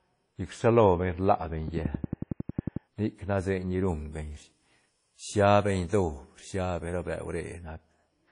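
From the first moment the speech carries plainly audible damage that is most likely WMA compression. The transform blocks smear quantisation noise over tens of milliseconds, so consonants ring and a washy hiss rises and falls with the voice. Nothing is left above about 10.1 kHz, which points to a low bitrate near 32 kbps. Unlike broadband noise, this hiss lives inside the signal and vanishes in gaps.

Between 1.68 and 2.77 s a train of clicks sits over the sound: about fifteen near-identical pulses at a steady 11.1 per second, peaking roughly 10 dB above the speech. They are likely interference or a faltering interface injecting pulses. Their even spacing and identical shape set them apart from the random crackle of a worn recording or from codec dropouts, and they tick on regardless of what the voice is doing.

From 3.88 to 7.62 s the treble jumps: pre-emphasis was left on, following the 75 µs FM curve with no matching de-emphasis. 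At 10 kHz the level is about 14 dB higher relative to 1 kHz, so the voice turns thin, bright and hissy on sibilants. Because it switches on and off at set times and tilts the whole upper spectrum smoothly, it differs from a resonant EQ peak or from the codec's ringing.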